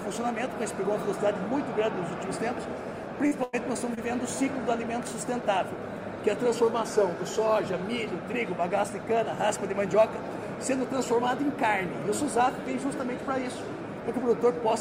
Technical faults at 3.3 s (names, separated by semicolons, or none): short concealed packet loss